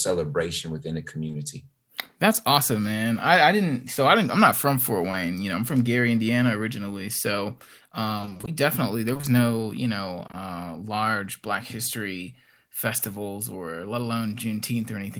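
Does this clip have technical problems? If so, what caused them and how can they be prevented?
Yes. Short concealed packet loss: audio packets arrived too late for the decoder, so the receiver extended the preceding sound to fill each gap and then blended back in. This produces a brief smear at 1.27–1.35 s, just after "within the", and at 5.11–5.15 s, just before "you know I'm from". A larger jitter buffer or forward error correction would cover such isolated losses.

Repeated packet loss (robotic sound): from 8.17 to 10.35 s, packets kept going missing, roughly a dozen holes of about 20 ms each, covering about 12% of that span. Every hole was patched from the previous sound, so the passage turns choppy. A steadier network connection, with redundancy such as FEC, prevents this.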